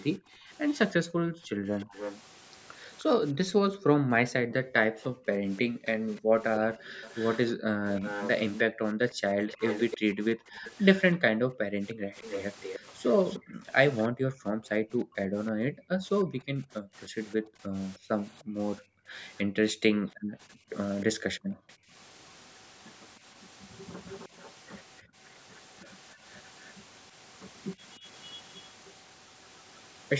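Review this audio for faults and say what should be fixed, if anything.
Background gated by the echo canceller runs from 0.19 to 21.93 s, with a further short dip at 25.02 to 25.16 s. While the far-end loudspeaker is active, the canceller's suppressor pulls the microphone down hard, up to about 40 dB, so the room tone drops out and snaps back when it releases. Across the long stretch the gaps add up to around ten seconds. Prevention: make the suppressor gentler, or add comfort noise so the background doesn't vanish.

An echo leak is heard from 0.7 to 14.06 s and again from 17.31 to 29.77 s: a copy of the speech trails it by about 307 ms. In the first stretch it sits roughly 10 dB below the direct speech. In the second it is weaker, around 20 dB down. This is likely residual echo that the canceller on a loudspeaker-playing endpoint failed to remove, sent back into the call. The band limit near 8 kHz is the normal call processing. 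Prevention: use a headset, or lower the loudspeaker volume and improve echo cancellation on that endpoint.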